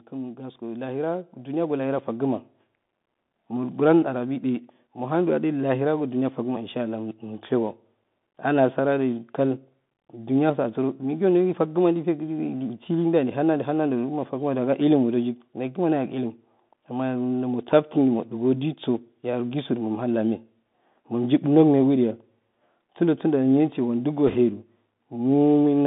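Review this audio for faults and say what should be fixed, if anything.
The whole recording has gone through the Bluetooth CVSD headset codec. The line is confined to roughly 150 Hz to 3.6 kHz, which fits a 64 kbps CVSD voice link. The codec sends one bit per sample, up or down, with an adaptive step. On sharp, loud high content that step lags behind, so s sounds come out scratchy and a grainy hiss sits under the speech. A plain low-pass would sound dull but clean. The granular texture and slope distortion are what mark this as CVSD. Preventing it means using a wideband headset profile such as mSBC or LC3 instead of the narrowband fallback.

Automatic gain rising runs from 0.11 to 7.53 s. The gain control judged the input too quiet and raised its gain by about 10 dB over those seven seconds. Speech and background noise swell together at the same slow pace. A speaker moving closer would raise the voice but leave the room noise where it was, and a level edit would step abruptly. 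The joint, gradual climb points to AGC. Preventing it means disabling AGC or setting a fixed input gain before recording.

Bit errors on a Bluetooth voice link appear from 24.28 to 24.36 s, a brief burst of rushing crackle over the speech. The error rate is around 2 percent. In CVSD every bit carries the same small weight, and a wrong step decays away, so the damage is a short noisy smear rather than the sharp loud clicks of PCM bit errors or the gaps of dropped packets. Preventing it means improving the radio link by keeping the headset close to the receiver, clearing line of sight and reducing 2.4 GHz interference.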